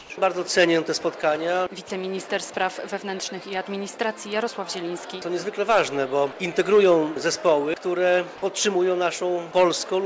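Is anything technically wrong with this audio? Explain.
Yes, there are two short faults, both from the call's silence handling.

From 0.0 to 0.10 s, the opening background is comfort noise in place of the background. The sender likely stopped transmitting during the pause, and the receiver substituted synthetic noise, about 2 dB quieter than the real background, which sits about 23 dB below the loudest parts. It is steady and featureless rather than a loss of actual sound.

From 1.88 to 1.90 s, sound dropped by the voice detector: about 10 ms of real sound gives way to the same smooth synthetic noise. The sender's detector likely mistook the quiet sound for background and cut transmission. Unlike the opening, actual content goes missing here, not just the background texture.

The call path's band limit, with nothing above 8 kHz, fits G.722 at 64 kbps and is not a fault.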